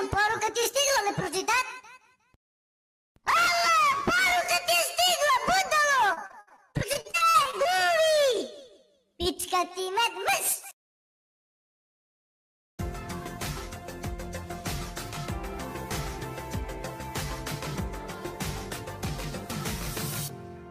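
From 6.13 to 7.67 s there is repeated packet loss, giving a robotic sound. Packets kept arriving late or not at all, which fits about sixteen separate losses. Each hole was patched by stretching the preceding sound, so about 27% of the stretch is synthetic fill. The audio turns choppy and robotic, with 408 ms filled and 320 ms simply missing; the longest gap is 63 ms. A spectrogram shows repeated, smeared harmonic copies broken by brief blank columns, and the waveform shows flattened, recycled segments.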